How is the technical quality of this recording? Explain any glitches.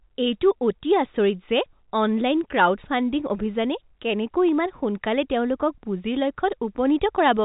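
Nothing stood out on listening to this speech recording, which comes through on an ordinary telephone line with its usual narrow band that stops a little below 4 kHz.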